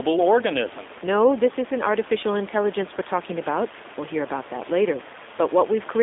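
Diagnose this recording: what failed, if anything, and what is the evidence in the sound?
The codec stage is at fault: the speech has the rough, slightly synthetic texture of G.729 throughout, which fits an 8 kbit/s stream. The encoder rebuilds each 10 ms frame from a vocal tract filter, a pitch predictor and a few pulses, so fine detail is replaced by a model, and the room noise, sitting about 18 dB below the speech, warbles. On a spectrogram, energy is confined to roughly 300 Hz to 3.6 kHz with nothing above 3.8 kHz, and harmonics look smeared.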